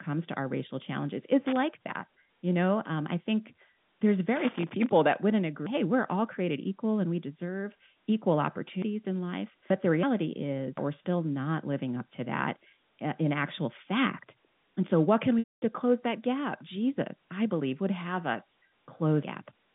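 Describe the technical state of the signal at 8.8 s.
At 8.82 s the speech jumps forward, about a fifth of a second simply missing and the two sides butted together with no gap, over the narrow telephone band. This is likely a dropped buffer (overrun), where samples were overwritten before being collected.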